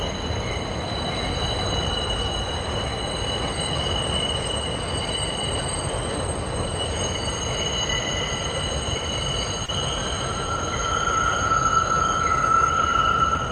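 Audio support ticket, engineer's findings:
Short concealed packet loss, 9.65 to 9.70 s. Brief smear in the sound. About 20 ms never arrived; receiver extrapolated prior audio for 26 ms, then crossfaded back.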